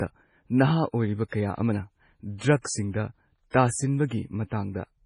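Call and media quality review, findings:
MP3 compression, whole clip, heavy damage. Nothing above 10.4 kHz, so the top end's gone dull, and the speech has that watery, swirly texture with chirpy s sounds and smeared attacks. Likely the encoder starving for bits, consistent with a low bitrate around 24 kbps, chopping the treble and flickering weak frequency lines on and off between frames.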